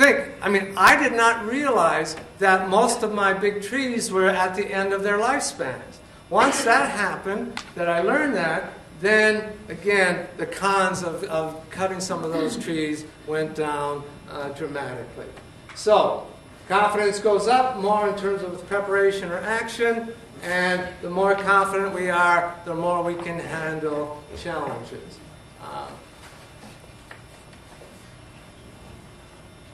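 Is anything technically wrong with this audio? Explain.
No, nothing technically wrong stands out here; it all comes through without a single glitch worth pointing to.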